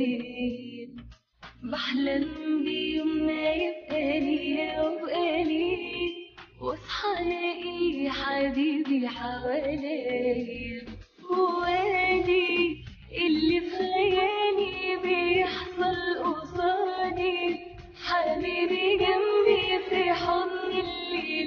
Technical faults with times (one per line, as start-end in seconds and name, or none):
15.66 compressed frames skipped
18.64 compressed frames skipped